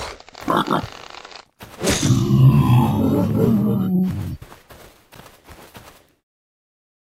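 From 4.83 to 5.36 s the processor falls behind, missing several deadlines in a row on short buffers of around 10 ms. This is processor overload crackle: each late buffer repeats old audio with hard edges, so the sound turns gritty and torn until the load eases.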